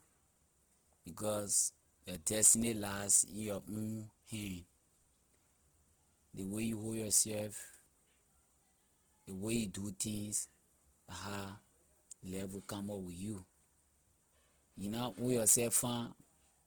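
Throughout the speech, the sound is grainy and rough, with a noisy texture over the voiced parts and only few spectral holes, so little swirling. The damage is plainly audible from start to end. It likely comes from Opus compression in its music mode, which fits a low rate around 16 kbps. When bits run short, the encoder fills bands with folded or noise-like content instead of dropping them. Bandwidth stays full, reaching about 20.1 kHz.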